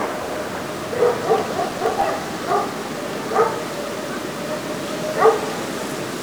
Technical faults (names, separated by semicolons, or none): processor overload crackle